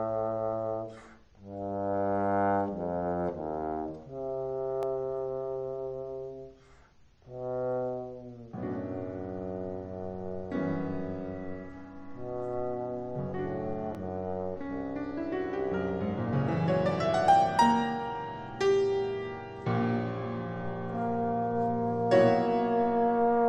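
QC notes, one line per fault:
4.83 s, dropped buffer (overrun): likely the input buffer was overwritten before being read, losing about 5 ms; the sound jumps ahead, no gap.
13.95 s, dropped buffer (overrun): likely an unread buffer was overwritten, discarding around 10 ms; both sides splice directly, giving a skip forward.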